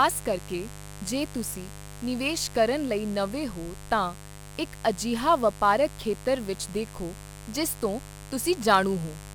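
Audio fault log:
throughout, mains buzz: a steady, raspy buzz sits under the speech at roughly 15 dB below it, built on 50 Hz mains. Sharp switching spikes leak in twice per cycle, so the disturbance repeats 100 times a second and carries a dense ladder of 50 Hz harmonics rather than a pure hum. A spectrogram shows evenly spaced horizontal lines at multiples of 50 Hz running the full length, and the waveform shows a fine, regular spiky texture between phrases.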